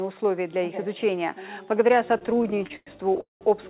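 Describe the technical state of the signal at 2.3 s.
At 2.3 s the signal is inside a run of repeated stalls (stutter) lasting from 2.18 to 3.21 s. Packets reached the receiver late, so its jitter buffer kept running dry, and each time it stretched out the last sound until fresh audio arrived. Fourteen such stalls fill about 277 ms, or roughly a quarter of the span, the longest lasting 106 ms. The result is a dragging, hiccuping stutter rather than missing audio. On a waveform the stretches show as short repeated cycles, with the longer ones tapering in level. On a spectrogram they appear as flat, smeared bands where the spectrum freezes, all held below 4 kHz by the G.711 call path.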